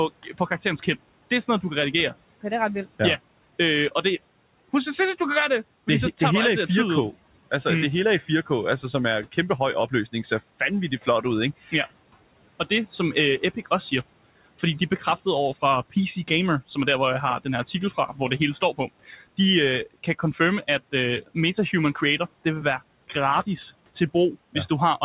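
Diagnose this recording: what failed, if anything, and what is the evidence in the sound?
The failure is in call processing: speech cut by the noise suppressor. At 0.23–0.87, 8.21–11.73, 12.70–13.92, 14.59–15.26, 15.90–16.77 (after "over fra"), 17.44–19.38 and 19.94–22.45 s (before "det vil være"), short fragments sink by about 11 to 17 dB. The suppressor judged quiet speech to be background and turned it down. Unlike packet loss, nothing breaks off, clicks or repeats. The sound thins and swallows rather than dropping out.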